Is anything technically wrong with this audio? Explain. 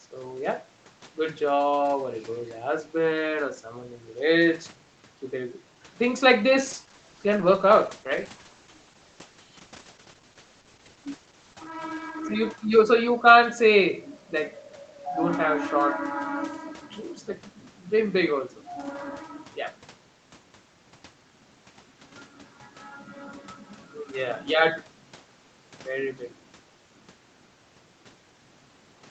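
Yes, there is a call bitrate drop from 6.61 s to 12.43 s. The call's bandwidth estimate fell, forcing the Opus encoder to code more coarsely, consistent with a drop from 32 kbps to about 13 kbps. The speech sounds rough and muffled for nearly 6 s. On a spectrogram, the upper band thins and goes smeared below its usual 8 kHz ceiling.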